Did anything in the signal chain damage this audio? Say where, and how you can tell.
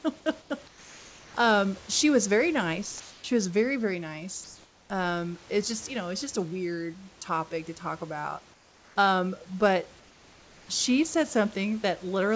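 Yes, in call processing. In the pauses at 0.42–0.50, 0.68–1.34 (just before "um she was very"), 3.00–3.24, 4.44–4.90 (after "was very very"), 8.54–8.96 and 10.00–10.68 s (before "she said"), the room tone goes flat and featureless, sometimes about 3 to 4 dB quieter. That's likely comfort noise in place of the background: the sender stopped transmitting during silence, and the receiver filled the gap with synthetic noise.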